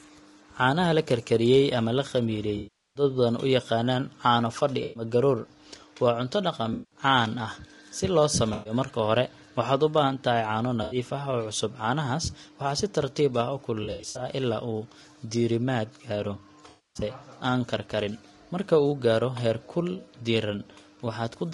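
Throughout, the speech sounds rough and grainy with a dulled top band, likely from low-delay AAC compression (AAC-ELD) at a bitrate near 32 kb/s. AAC frame loss with concealment leaves smeared, noisy patches where the decoder fills gaps from earlier spectrum: 2.57–3.03 s, 4.83–5.03 s, 6.73–6.99 s, 8.53–8.73 s, 10.83–10.97 s, 13.83–14.25 s (scattered short gaps, longest about 70 ms) and 16.69–17.03 s.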